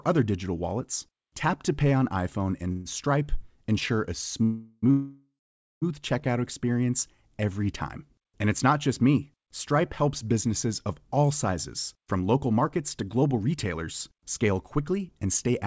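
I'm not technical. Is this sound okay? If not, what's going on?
No. Around 2.72 to 2.87 s, and at 4.43 to 4.84 s and 4.90 to 5.84 s just after "ensure a", the voice stalls into a fading buzz, with about half a second of silence in the last stall, then carries on. These are call audio freezes, likely caused by delayed network packets.

From 11.97 s to the end, the speech runs about 8% fast but keeps its normal pitch. This is a jitter buffer speed-up: the receiver trimmed roughly a third of a second to catch up.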